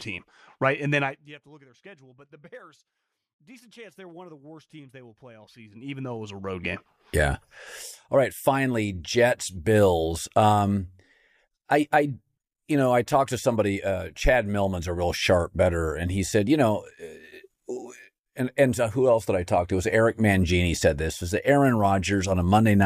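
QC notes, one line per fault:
1.01–1.37 s, zipper noise: just before "to look at their", the level falls by about 25 dB in 1 dB steps at roughly 70 steps per second. Each unsmoothed jump leaves a small click, so the fade sounds like a fast, buzzy zip. The waveform envelope forms a fine staircase, and the spectrogram shows dense, thin broadband vertical lines.
5.40–6.77 s, zipper noise: after "teams they will play", the level rises by about 25 dB in 1 dB steps at roughly 20 per second. This is heard as slower, countable ticking with a coarse staircase and sparser vertical lines.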